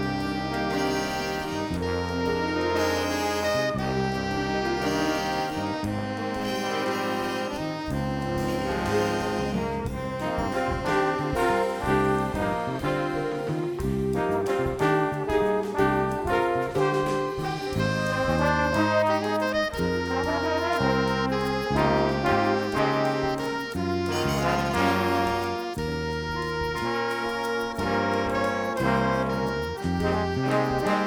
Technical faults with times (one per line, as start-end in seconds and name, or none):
none